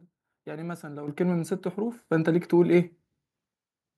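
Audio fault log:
1.08 s, microphone volume stepped up: the speech and the background beneath it jump louder together by about 9 dB in a single step, with no fade. The calling software judged the microphone input too quiet and raised the device's input volume in one move. Because the boost is applied before anything else in the chain, every sound reaching the microphone rises at once, so the level change sits mid-stream rather than following the talker.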